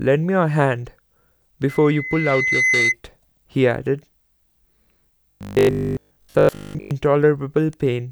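From 1.68 to 2.95 s, the microphone is picking up the loudspeaker it feeds, and at 2 kHz the gain around that loop rises above one. The tone therefore reinforces itself on each pass. The result is a loudspeaker feedback squeal: a single whistling pitch at 2 kHz that swells over roughly a second until it is about as loud as the speech, then stops at 2.95 s.

From 5.31 to 6.91 s the speech turns into a rigid, metallic buzz pitched at 50 Hz, while still loosely tracking the syllables. This is robotic sound from repeated short buffers, likely caused by new audio arriving too seldom, so the playback fills the gaps by looping its last short chunk. A 50 Hz buzz fits a repeated piece about 20 ms long, and most of the real audio in this stretch is lost and replaced by the repeats.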